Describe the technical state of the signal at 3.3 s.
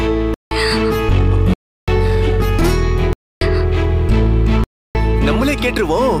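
At 3.3 s you're right in the middle of a block of digital silence that runs from 3.13 to about 3.41 s, a hole of roughly 283 ms. A whole stretch of samples has been replaced by zeros, so the sound drops straight to dead silence with no fade and comes straight back. At this length it's heard as a clear gap rather than a tick.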